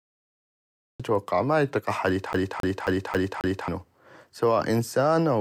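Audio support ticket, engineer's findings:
Cut-off start: digital silence from 0.00 to 1.00 s, then speech enters abruptly at "ما اطيق احد" with no attack or fade-in, mid-sound. Probable component: capture or stream start trigger. Recording began late, so the opening of the utterance was never captured.

CD stuck on one turn: fast, even stutter from 2.33 to 3.68 s, right after "ما اطيق احد". A 0.27 s fragment repeats five times with a brief mute at each jump. Probable component: disc transport. A scratch throws the laser back one track on every rotation.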